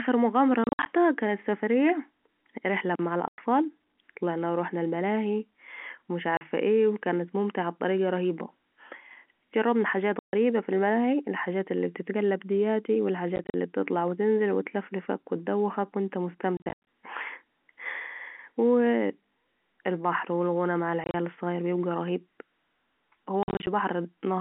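Packet loss filled with silence at 0.64, 3.28, 6.37, 10.19, 13.36, 16.57, 21.04 and 23.43 s cuts abrupt holes in multiples of 10 ms packets, with none of the smeared repeats of concealment.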